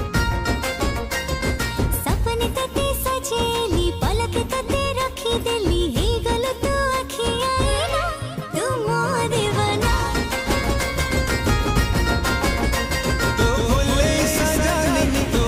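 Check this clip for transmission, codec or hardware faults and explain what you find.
One fault is present: a doubled audio track from 10.46 s to the end of the clip. The cause is likely the same signal being picked up a second time through a slower path, so two copies of the audio are mixed together out of step. The later copy runs about 200 ms behind at roughly the same loudness, full-band and with no decay or room colour. It cuts in abruptly, and from there every sound is followed by a distinct, equally strong repeat.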